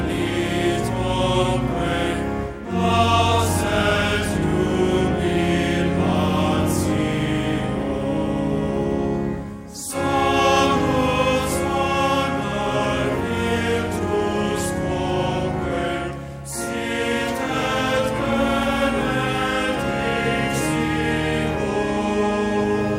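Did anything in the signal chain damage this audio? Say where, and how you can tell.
Yes. At 18.63 s a single sharp click marks dropped samples. A fraction of a millisecond of the stream is missing, so the waveform jumps to a later value. A spectrogram shows one thin vertical line. The likely stage is a driver or buffer glitch.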